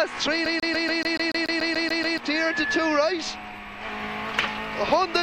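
From 0.46 to 2.18 s the CD gets stuck on one turn: a scratch keeps throwing the laser back, so the same 144 ms slice of sound repeats 12 times, each jump briefly muted. It's a fast, even stutter; a spectrogram shows identical blocks separated by thin vertical gaps.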